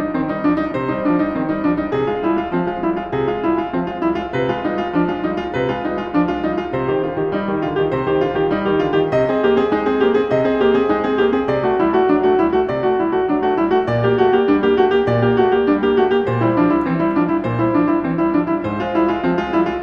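Nothing in this bit of music catches the ear as a technical problem; it just rolls along the whole way without a hitch you could point to.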